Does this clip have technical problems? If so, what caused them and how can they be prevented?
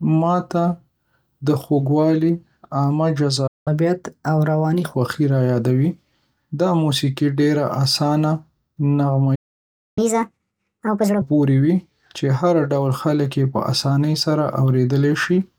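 Yes. The speech goes silent in a playback stall at 3.47 to 3.68 s (about 190 ms) and 9.35 to 9.98 s (about 620 ms), then resumes. The likely cause is the player running out of buffered data or its thread being blocked. A larger playback buffer and a higher-priority audio thread would prevent it.

Right after each stall comes catch-up at higher speed. From 3.68 to 4.94 s the audio runs at 1.15 times normal speed, about two semitones sharp. From 9.98 to 11.22 s it runs at 1.5 times, about seven semitones sharp. The player is resampling its backlog to win back lost time. This differs from slow speed drift because each fast stretch begins at a stall. Gentler catch-up, or dropping the backlog instead, would avoid the chipmunk effect.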